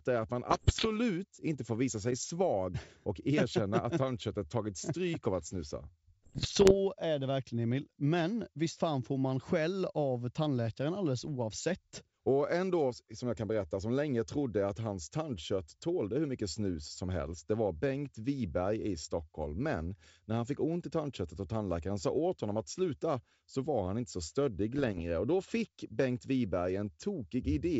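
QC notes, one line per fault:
0.50–0.90 s (after "är att man"), 6.23–6.73 s (after "stryk av att snusa"), 24.78–25.01 s (after "han inte så stöddig"): bit errors on an ADPCM link. The rough bursts with pops and brief level jumps fit an error rate of around 0.7 to two percent in the clear 7 kHz G.722 path. Each flipped bit throws off the decoder's step size and predictor, so the damage rings on. On a spectrogram these show as broadband vertical smears, and the waveform shows spiky, uneven envelope jumps.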